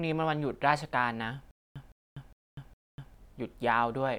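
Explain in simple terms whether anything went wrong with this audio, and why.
From 1.51 to 3.14 s there's a stutter with silent gaps: a 0.16 s fragment repeats four times between 0.25 s silences, likely a stalling player.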